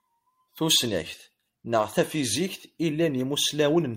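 From 0.87 s to 2.35 s the Bluetooth link suffers an SBC bit pool drop, which fits a fall from bit pool 31 to about 14, near 99 kbps. Starved upper sub-bands dull the treble of the speech while gritty quantisation noise rises, until the rate recovers.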